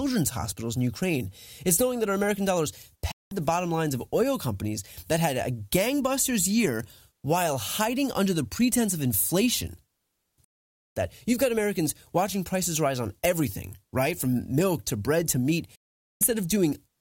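At 3.11 s the speech fades out in about 8 ms to complete silence. It returns at 3.32 s with "the bottom lines of", after a digital broadcast dropout. The receiver stopped decoding valid frames and muted. Longer holes follow at 10.44–10.97 s and at 15.75–16.22 s, the last just after "to bread to meat". That 0.46 s gap fits a run of failed frames. Unlike packet-loss concealment, nothing is smeared or repeated across the gap. The audio is clean silence, and the programme resumes further on, missing what was sent.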